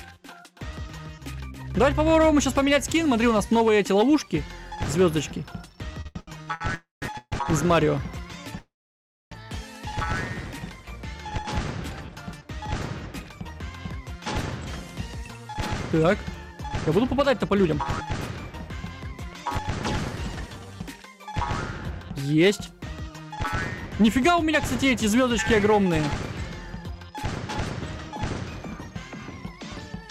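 From the very start until 1.78 s, an echo trails the audio by about a third of a second, roughly 10 dB quieter, with no room colour, and it drops away abruptly. This is a doubled audio track, likely a second copy captured through a slower path and mixed in behind the first.

From 6.01 to 6.62 s the audio stutters and drags through five brief hitches, the longest 80 ms. About half that stretch is filled-in sound. This is repeated stalls (stutter): packets kept arriving late, the jitter buffer ran dry each time, and the receiver stretched the last sound until it could resume. Nothing is lost.

Three freezes follow. From 6.75 to 7.03 s the sound holds as a fading buzz, then goes silent for 0.16 s. From 7.18 to 7.33 s it does the same, with 0.04 s of silence. From 8.59 to 9.32 s it fades into a long 0.62 s silence. Each time the audio resumes where it stopped. This call audio freeze was likely caused by packets held up in transit that emptied the jitter buffer, adding 0.27, 0.14 and 0.73 s of delay.

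From 9.90 to 10.61 s the audio runs at 92% speed, and from 20.10 to 20.72 s at 90%, with sounds drawn out at unchanged pitch. This jitter buffer slow-down comes from the receiver repeating pitch periods to rebuild its reserve, adding 63 and 67 ms.

From 13.45 to 14.83 s the audio hurries at 108% speed, and from 23.35 to 26.51 s at 106%, at the same pitch. This jitter buffer speed-up trims short pitch-period slices to cut excess buffered delay, removing about 0.1 s and 0.2 s respectively.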